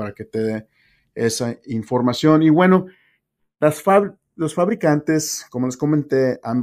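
Channels drifting apart runs through the whole clip. The left and right channels appear to come from devices on separate clocks, so the offset between them slowly grows. The rate fits a mismatch of around 30 parts per million, and the gap reaches only a fraction of a millisecond by the end. When the speech is folded to mono, comb-filter notches glide gradually across the spectrum, giving a slow flanging sweep.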